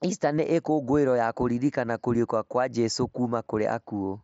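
At 3.45 s there is a brief concealed Bluetooth headset packet loss. About 15 ms of speech, which points to a couple of dropped packets on the mSBC link, was filled by repeating the best-matching recent waveform. It sounds like a buzzy flicker. On a spectrogram it shows as a short smeared patch, and on the waveform as a repeated cycle with a slight seam.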